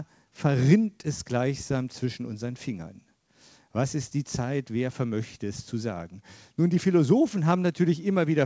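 Nothing's wrong here as far as the ear can tell, just audio that came over a call link, with the top end stopping at about 8 kHz the way a G.722 codec would leave it.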